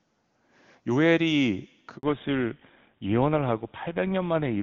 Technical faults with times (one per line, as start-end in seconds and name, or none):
1.97-2.03 handover gap
2.03-4.63 fallback to narrowband